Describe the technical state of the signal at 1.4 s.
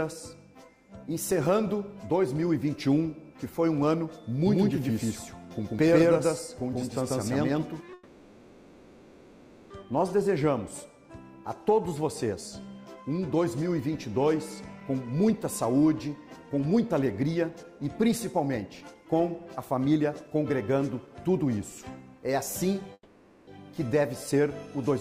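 At 1.4 s the signal is intact, with no audible technical fault at that moment.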